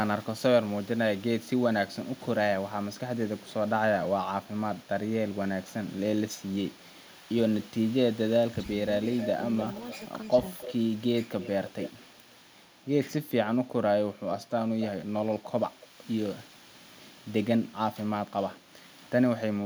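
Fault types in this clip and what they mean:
Speech suppressed in double talk: from 8.52 to 8.67 s the speech dips by about 15 dB for roughly a tenth of a second. This is likely an echo canceller turning down both its own talker and the loudspeaker echo during overlapping talk. Here sound is removed, not added.
Echo leak: a delayed, quieter copy of the speech, about 10 dB down, trails by 300 ms from 9.13 to 12.35 s and by 280 ms at 14.48 to 14.88 s. This is likely loudspeaker pickup that was sent back. It adds a duplicate rather than removing level.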